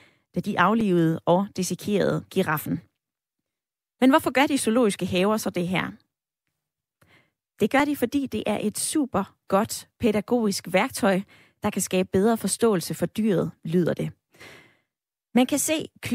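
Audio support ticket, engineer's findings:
Output buffer likely not filled in time, so a block was zeroed: block of digital silence at 0.81 s, between "da de" and "og dissekerede giraffen". The 5.3 ms hole, fitting a 256-sample buffer, cuts hard and is heard as a tick. Likely same underrun at 7.80 s, just before "de fordi det er": a 2.5 ms zero block heard as a tick.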